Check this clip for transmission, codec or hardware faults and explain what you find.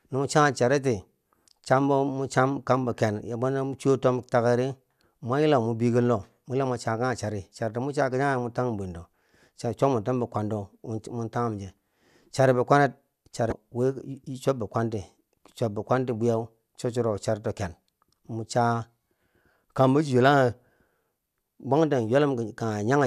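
One fault, at 13.49 to 13.52 s, just after "chari bikwanet": damaged data in a compressed stream. Corrupted bytes there led the decoder to misread those frames and lose sync until it found the next frame header. The result is a brief chirp, squawk, click or short hole breaking into the speech.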